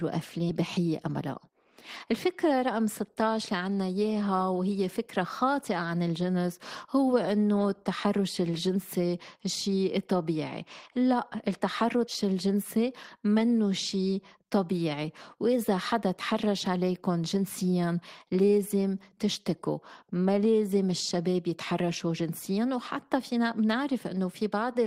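At 0.49 to 0.51 s, the speech skips ahead. Roughly 0.7 s of audio was dropped. Playback jumps forward with no gap, the two sides joined directly. From 0.61 to 1.5 s, a jitter buffer speed-up follows. Short pitch-period pieces are cut repeatedly, removing about 50 ms. Speech runs at 105 % speed, pitch unchanged, slightly hurried.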